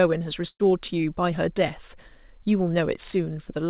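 At 0.48 s a burst of packet loss hits: a run of packets arrived too late or not at all, so about 120 ms of speech is lost. The receiver stretches the last sound, fading it toward silence, until 0.61 s, when the speech resumes further on, still band-limited to 4 kHz.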